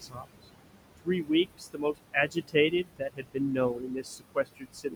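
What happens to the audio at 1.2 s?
At 1.2 s the sound falls inside a stretch of speech cut by the noise suppressor, running from 0.98 to 1.3 s. The suppressor misjudged part of the speech as steady noise and pulled it down with the background, by about 22 dB at its deepest, across roughly 150 ms in total. Soft consonants and word edges come out swallowed and faint. On a waveform the envelope dips abruptly mid-phrase, and a spectrogram shows speech energy thinning to near-blank patches.

The same moment also carries the noise suppressor artifacts present throughout the clip. The suppressor estimates the steady room noise, which sits about 11 dB below the speech, and cuts the bands it classes as noise by about 21 dB frame by frame. The background sinks between syllables and rises back under them. A spectrogram shows the noise floor pumping in step with the speech.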